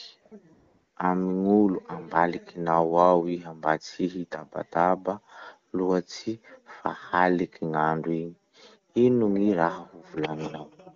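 AMR comfort noise appears at 0.21 to 0.25 s, 0.27 to 0.31 s and 0.53 to 0.95 s. The phone treated these stretches as silence and stopped sending speech frames. The receiver filled the gaps with smooth synthetic noise, so the real background switches out in two 40 ms blips and then a 420 ms stretch.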